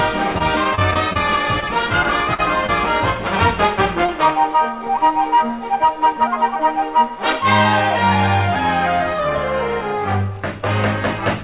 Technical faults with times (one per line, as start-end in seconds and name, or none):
0.38-2.70 repeated packet loss (robotic sound)
4.06-4.10 short stall from a late packet